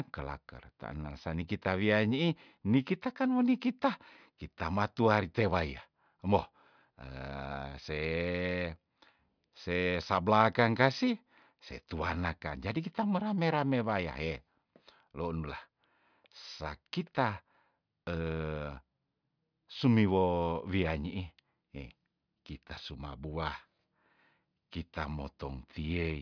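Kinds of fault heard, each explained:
No kinds of fault are heard in this speech clip.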